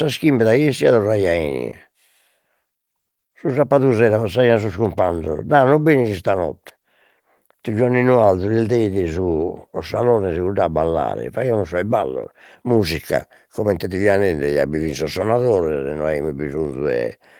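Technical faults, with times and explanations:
No technical faults can be heard anywhere in the speech.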